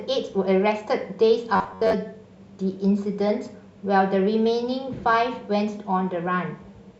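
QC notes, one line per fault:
1.56–1.94 s, robotic sound from repeated short buffers: speech turns to a rigid metallic buzz at 93.8 Hz, likely from a roughly 11 ms chunk looped while about half the audio is skipped.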